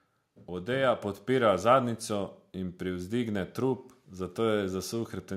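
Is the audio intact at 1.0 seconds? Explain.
No. At 1.02 s the microphone volume stepped up: the call software judged the input too quiet and raised the device's input volume in a single jump of about 4 dB instead of easing it up. Because the change happens before any processing, the speech and the background noise get louder together, and the level stays higher from that point on. The step lands just before "podpira zadnjico in".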